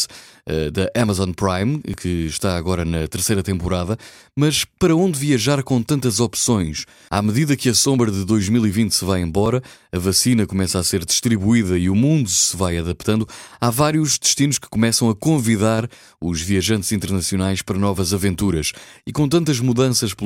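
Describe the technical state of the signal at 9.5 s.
At 9.46 s, between "se vai" and "a vacina começa a", the speech jumps forward with no gap of silence. That is the signature of a dropped buffer (overrun), most likely caused by the capture program failing to read a block before the hardware overwrote it. The missing few milliseconds are simply absent, and the audio on either side is butted together.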